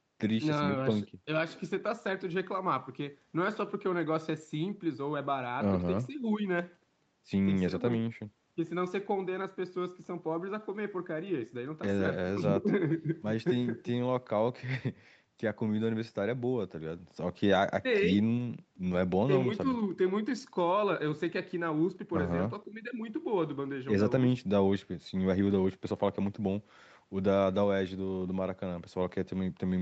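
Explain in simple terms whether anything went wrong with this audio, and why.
Listening through this speech recording, nothing stood out as going wrong; it sounds like an ordinary call, with the top end limited to about 8 kHz as expected for this kind of connection.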